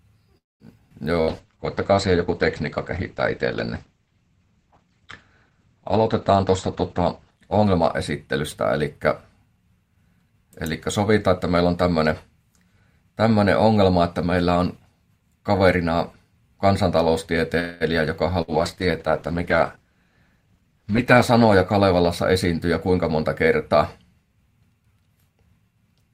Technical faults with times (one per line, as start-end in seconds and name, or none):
0.37-0.63 call audio freeze
0.90-0.93 skip ahead
1.13-1.96 jitter buffer slow-down
1.21-1.30 burst of packet loss
1.29-9.09 call bitrate drop
6.99-10.45 jitter buffer speed-up
17.60-17.83 call audio freeze
18.42-18.51 burst of packet loss
18.46-23.87 call bitrate drop
20.05-20.63 jitter buffer speed-up